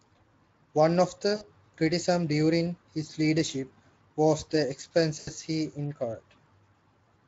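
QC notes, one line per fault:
1.35–1.44 s: VoIP packet loss concealed by the speech codec. About 60 ms is missing, which fits three lost 20 ms frames. The decoder repeats its last pitch and filter with falling gain, so the sound smears into a fading buzzy tone or coloured noise.
5.19–5.32 s: VoIP packet loss concealed by the speech codec. About 80 ms is missing, which fits four lost frames. The extrapolation runs longer, giving a longer stretched, decaying sound before the Speex decoder recovers.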